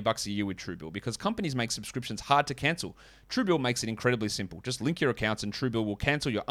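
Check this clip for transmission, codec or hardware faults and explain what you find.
No faults found in this recording.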